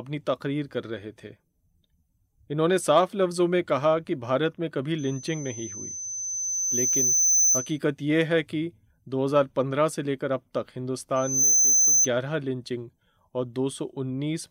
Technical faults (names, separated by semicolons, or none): loudspeaker feedback squeal